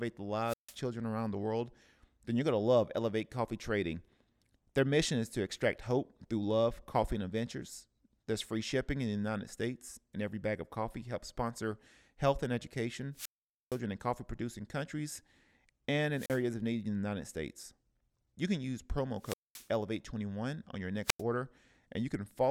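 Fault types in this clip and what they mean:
Wireless microphone squelch dropout, at 0.43, 13.13, 16.13, 19.19 and 21.04 s: the analogue FM radio link from the microphone fades until the receiver's squelch mutes its output. Each event is a short rise of hiss, then near silence, then the speech returning. The muted holes range from about 41 ms at 16.13 s to 464 ms at 13.13 s, the longest falling between "sponsor health and education" and "in coffee producing countries".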